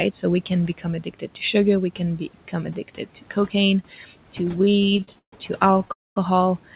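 A speech recording passed through a call codec with nothing above 4 kHz, which fits G.711 A-law narrowband coding, over room noise about 21 dB below the talker. The noise suppressor misread parts of the speech as noise, producing speech cut by the noise suppressor at 0.68–0.86 s just after "we can", at 1.02–1.37 s just before "sugar we can", and at 2.75–3.54 s, pulling sound down by about 11–12 dB so it turns faint and swallowed. Late-arriving packets then drained the jitter buffer again and again from 4.56 to 5.90 s, giving repeated stalls (stutter): about two dozen gaps, the longest 140 ms, are filled with continued sound covering roughly 28% of that stretch, so the audio drags and stutters. At 5.92–6.17 s a call audio freeze follows, likely from packets held up on the way, inserting a 240 ms pause that is almost entirely silent before the audio resumes where it stopped.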